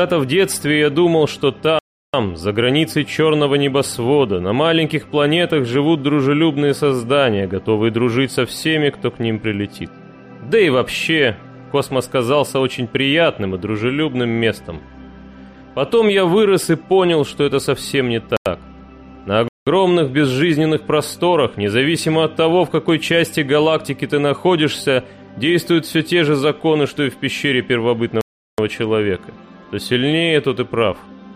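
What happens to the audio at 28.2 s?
At 28.21 s the sound drops abruptly into a short hole until 28.58 s, about 0.37 s: a block of digital silence, where zeros replaced the samples, which fits a 16384-sample block.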